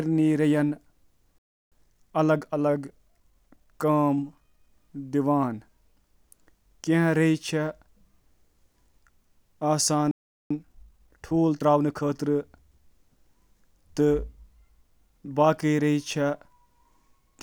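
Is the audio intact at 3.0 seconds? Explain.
No, 3.0 s falls inside a time-compressed catch-up from 1.72 to 4.72 s. Small cut and cross-faded pieces make the speech run 1.1 times fast. Unlike a plain speed-up, the pitch stays normal.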